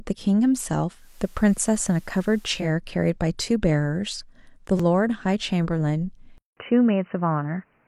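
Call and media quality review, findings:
Digital radio blending to analogue, 0.90–2.73 s: receiver lost the digital stream and cross-faded over about 255 ms to the FM broadcast. Level shifts about 1 dB, and hiss rises to roughly 35 dB below the speech.

Repeated buffer, 4.77–4.80 s: playback starved and re-sent a 5.33 ms block, fitting a 256-sample buffer, four extra times. Heard as a short buzz with hard joins, and about 20 ms of speech lost.

Input switched to a poorer device, likely cause, 6.38 s to end: 187 ms silence at the change, then speech goes dull and boxy. New background noise sits roughly 40 dB down, and level stays about the same.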